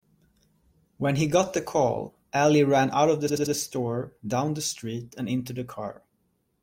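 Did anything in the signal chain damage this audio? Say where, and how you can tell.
Yes. At the codec or storage stage, repeated frames: one compressed block was decoded again and again, so the same 85.3 ms of speech plays four times in a row from 3.28 to 3.54 s. It sounds like a stutter, a short mechanical loop of identical sound rather than a natural repetition. The three extra plays lengthen the clip by 256 ms, which fits a single compressed frame being written or sent more than once.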